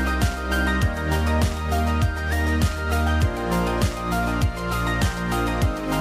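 Nothing stood out as a technical fault on listening to the recording.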